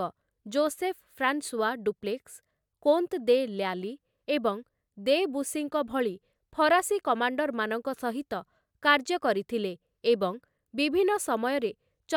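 No technical faults can be heard anywhere in this speech recording. Nothing in the audio points to a dropout, glitch or other disturbance at any point.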